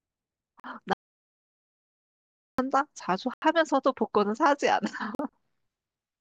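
At 0.60 s a block of digital silence replaced about 43 ms of the speech. The length fits one 2048-sample buffer. The sound cuts to zero and back with no fade, leaving a short hole.

From 0.93 to 2.58 s there is an audio dropout to silence. The input was likely lost, through a disconnected device, a failed link or a mute, while the recorder kept writing zeros. The speech stops abruptly mid-flow. For about 1.6 s there is complete silence with no room tone, and the speech lost during that time does not return.

At 3.34 s a longer block of digital silence, about 85 ms and consistent with a 4096-sample buffer, is heard as a gap. At 5.15 s another 43 ms block gives a brief hole.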